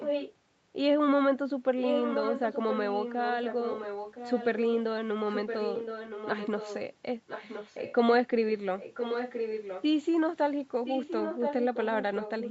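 An echo leak runs through the speech at 0 to 0.34 s, 1.81 to 4.77 s, 5.33 to 6.8 s, 7.27 to 7.95 s, 8.78 to 9.84 s and 10.85 s to the end. A copy of the speech trails about a second behind, likely from a far-end loudspeaker that the echo canceller didn't fully remove. It is strongest at the first, second and fifth spans, only a few dB under the speech, and faint at 7.27 s. On a spectrogram, cut off at 8 kHz by the call path, each harmonic pattern reappears a second later, overlapping the new speech.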